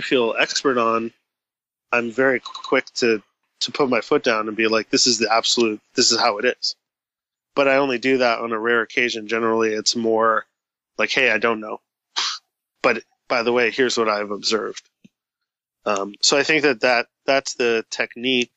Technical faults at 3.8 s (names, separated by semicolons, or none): none